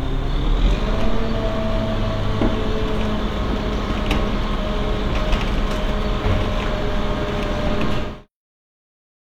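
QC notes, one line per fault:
3.16–3.19 s, damaged data in a compressed stream: a short glitch about 30 ms long. Part of the compressed stream is corrupt there. The decoder misreads those frames, loses sync, and resumes at the next valid frame header.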